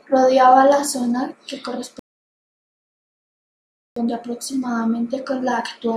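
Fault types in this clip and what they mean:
Rebuffering stall: The player ran out of downloaded speech and waited for more. After "la zona que", the sound drops to silence from 1.99 s to 3.96 s. It then picks up exactly where it stopped. Nothing is missing, but 1.97 s of dead air is added.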